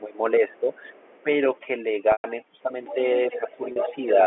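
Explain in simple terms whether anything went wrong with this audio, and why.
The whole clip has a broken-up background: it sits at near silence with faint twinkling specks. That is overdone noise removal. A noise reducer set too strongly shut off frequency bands it mistook for noise, taking quieter parts of the voice with them.

The voice briefly dips or thins at 0 to 0.18 s, 0.4 to 0.7 s, 2.63 to 2.7 s, and 3.38 to 3.92 s. This is likely speech suppressed in double talk: both sides spoke at once, and the echo canceller turned everything down because it could not tell the talker apart from the loudspeaker echo.

A second, fainter voice can be heard behind the talker from 0.49 to 1.23 s, very quietly. It returns, stronger, at 2.85 to 2.95 s, and is most noticeable from 3.32 to 4.2 s. This is likely the other side's voice leaking through, where sound from the talker's loudspeaker reached the microphone and the echo canceller did not fully remove it.

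At 2.12 s about 120 ms of sound is lost: a brief buzzy repeat fades into silence before speech resumes. A shorter, 40 ms version occurs at 3.72 s. This is packet loss with pitch repetition: pieces of the audio were lost, and the receiver filled each gap by repeating the last bit of voice.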